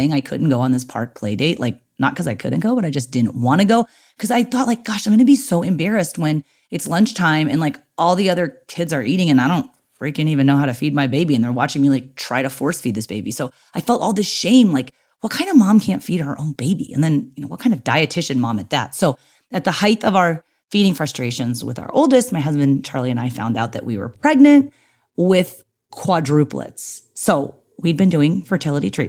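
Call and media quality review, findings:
No faults found in this speech recording.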